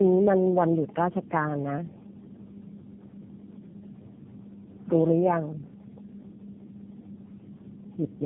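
Throughout the speech, tandem speech coding is heard. The call passed through three low-rate speech coders in a row, which fits G.729A twice and then AMR-NB. Each re-coded the last one's damage. Nothing remains above 3.7 kHz. The voice sounds muffled, rough and warbly.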